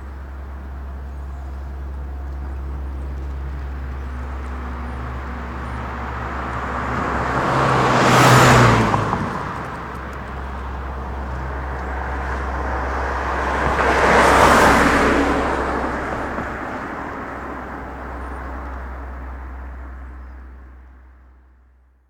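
Nothing goes wrong anywhere in these everyday sounds; there's no fault to point to at any moment.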